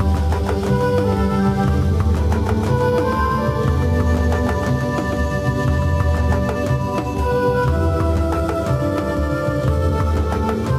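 From the very start up to 6.36 s there's a doubled audio track: a second, full-band copy trails about 150 ms behind, only a few dB quieter, with no reverb tail, and it cuts out abruptly. Likely cause is a slower duplicate capture path mixed in.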